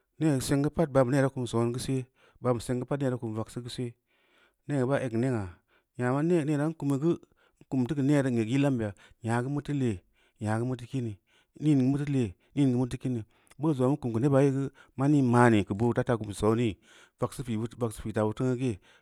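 Nothing in this recording stands out as a technical fault, so there's nothing to point to at any moment along the way.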